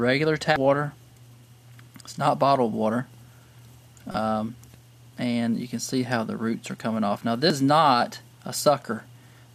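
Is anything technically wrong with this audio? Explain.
Yes. Damaged data in a compressed stream causes brief blips at 0.56 s, from 4.12 to 4.15 s, and at 7.50 s. Corrupted bytes make the decoder misread those frames and lose sync until it finds the next frame header, producing short chirps or squawks.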